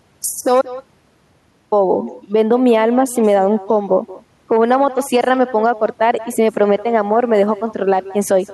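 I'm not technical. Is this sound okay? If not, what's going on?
No. Echo with no canceller runs through the whole clip: the speech returns about a fifth of a second later as a quieter copy, because the far end's loudspeaker sound reaches its microphone and nothing removes it. There is also an audio dropout to silence from 0.62 to 1.72 s: about 1.1 seconds goes completely silent, likely because the input was briefly lost while recording continued.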